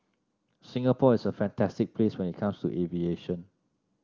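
Nothing stood out on listening to this speech.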